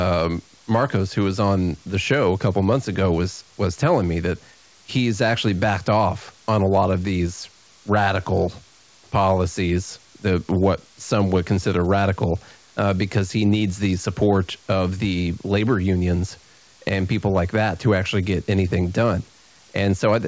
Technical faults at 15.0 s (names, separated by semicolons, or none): none